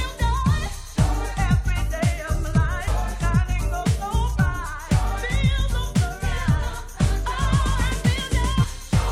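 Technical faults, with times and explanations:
2.87 s and 8.63 s, compressed frames skipped: whole compressed frames went unplayed, dropping around 300 ms and then around 150 ms of audio. Each jump fits a frame length near 21.3 ms.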